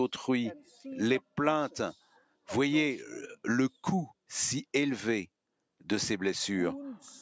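Twice the level sinks where the noise suppressor mistakes steady sound for noise: from 0.64 to 0.83 s, with a dip of about 7 dB, and from 1.96 to 2.48 s, where the cut deepens to about 12 dB and trims roughly 0.4 s of sustained or decaying material. These are sounds cut by the noise suppressor, and onsets pass more intact than tails. The audio shows call microphone processing, with nothing above 8 kHz.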